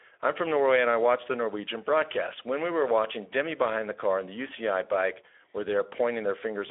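A speech recording runs throughout through the Speex codec. The damage is plainly audible from start to finish. Speex is a CELP coder that rebuilds speech from a predicted filter and a coded excitation. At this setting the excitation gets few bits, so the speech sounds noisy and hoarse. The sound fits a rate of about 11 kbps. The band is narrow, like a phone line from 300 Hz to 3.4 kHz. Nothing remains above 3.7 kHz.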